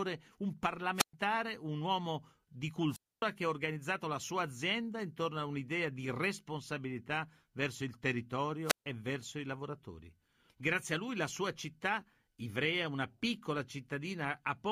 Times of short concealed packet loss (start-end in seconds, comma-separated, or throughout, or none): none